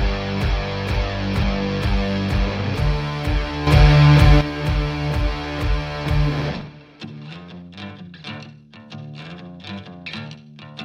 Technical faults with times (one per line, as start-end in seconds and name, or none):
3.67-4.41 sudden gain jump